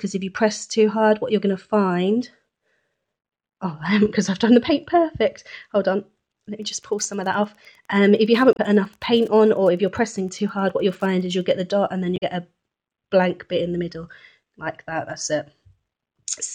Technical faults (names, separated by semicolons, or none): Wi-Fi interference; damaged data in a compressed stream